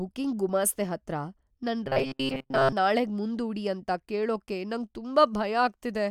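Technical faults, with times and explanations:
1.87 to 2.73 s: robotic sound from repeated short buffers. The speech becomes a stiff, metallic buzz at 134 Hz that loosely follows the words. Likely, new audio arrived too slowly, so a 7.5 ms segment looped while most real audio was skipped.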